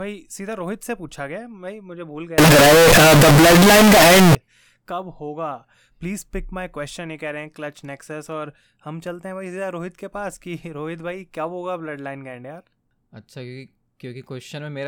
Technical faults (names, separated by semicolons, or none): float read as integer